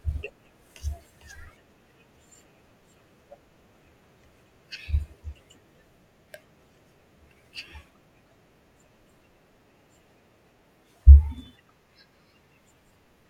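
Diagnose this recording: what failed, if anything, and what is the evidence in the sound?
Nothing in the speech stood out as a fault on listening, so there is no failed stage to point to.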